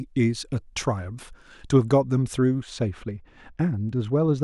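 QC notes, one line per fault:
2.61 to 4.44 s, de-emphasis applied wrongly. From 2.61 s to the end of the speech, the top end falls away on a smooth downward slope. By 10 kHz it sits about 14 dB below the level at 1 kHz. A treble cut meant to reverse pre-emphasis has been applied where none existed, or applied a second time. The slope is smooth, with no sharp edge. The result is a dull, muffled sound, as if heard through cloth.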